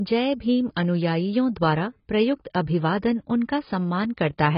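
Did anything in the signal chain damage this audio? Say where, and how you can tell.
Yes, at the codec stage, across the whole clip: the speech stops dead at 5.5 kHz, and sibilants sound dull, smeared and fizzy. A spectrogram shows a flat ceiling. This is likely heavy AAC compression, consistent with about 16 kbps.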